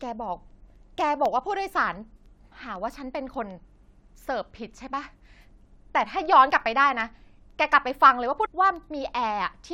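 Speech, with periodic USB or driver dropouts from 0.26 s to 9.51 s: every 0.25 s a tiny sliver of sound drops to silence, leaving steady ticks. At 8.44 to 8.46 s the audio jumps ahead with a small blip, likely a stream segment skipped when one chunk failed to load.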